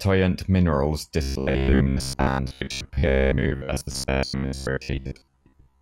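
Robotic sound from repeated short buffers, 1.22–5.82 s: likely 15 ms blocks looping while new audio arrived late, forcing a rigid, metallic 66.8 Hz buzz.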